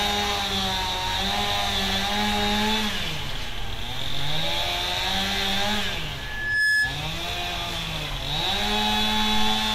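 A microphone in this recording of everyday sound picked up the loudspeaker it was feeding, and the loop's gain passed one at 1.7 kHz, causing loudspeaker feedback squeal from 6.16 to 7.03 s. That single tone swells over about half a second to a few decibels above the surrounding sound.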